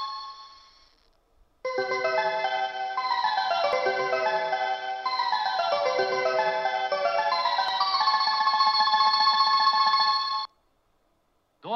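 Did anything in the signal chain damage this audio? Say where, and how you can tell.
Yes. There is audio missing between chunks at 3.73 s and 7.68 s: two skips about 4 s apart, each losing around 40 ms. The waveform jumps discontinuously with no silence, and a spectrogram shows a sharp vertical seam. Likely cause: a buffer stage dropping samples at 4-second chunk boundaries.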